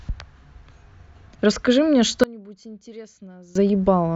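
From 2.24 s to 3.55 s the speech collapses to about 23 dB below its surrounding level, leaving only a faint residue before full level returns. The likely cause is one channel inverted: with one stereo side in reversed polarity, the centred voice that both channels share cancels on a mono sum, and only the small difference between left and right survives.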